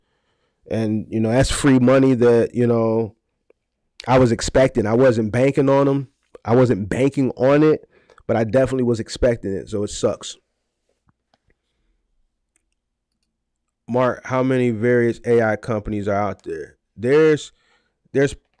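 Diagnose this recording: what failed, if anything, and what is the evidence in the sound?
Nothing in the signal chain failed: the level stays steady, the waveform shows no breaks, and the sound keeps its continuity throughout, with nothing pointing to trouble at any stage.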